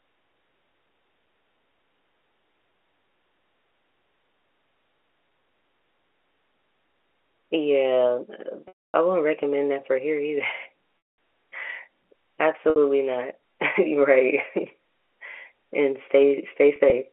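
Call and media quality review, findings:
Packet loss with pitch repetition: the receiver bridged gaps by repeating the last pitch period at 8.68–8.94 s (260 ms), 10.98–11.18 s (200 ms), 12.70–12.76 s (60 ms), and 16.76–16.92 s (60 ms scattered, longest run 40 ms). The short gaps sound like a buzzy held tone. The long gaps fade to silence before the speech cross-fades back in. G.711 A-law telephone coding at 64 kbps, band-limited to 300–3400 Hz.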